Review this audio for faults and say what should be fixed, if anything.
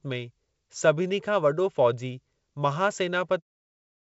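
No faults; nothing needs fixing.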